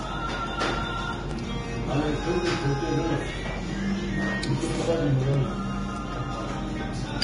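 Throughout, the sound is hissy and grainy, with nothing above 10.6 kHz. This is likely heavy Vorbis compression, fitting a low rate near 30 kbps. The treble is quantised so coarsely that fine detail turns to noise and attacks blur.

At 1.31 s and again at 5.34 s, a short click-like stutter appears. These are overlapping chunks. Each new chunk began before the previous one ended, so about 13 ms of audio plays twice at the join.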